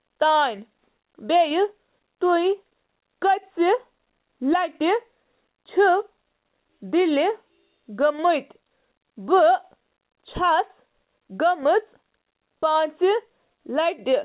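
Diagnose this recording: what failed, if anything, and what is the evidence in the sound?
Nothing stood out on listening to the speech: it comes across as an ordinary call-path recording, with no audible failure at any stage.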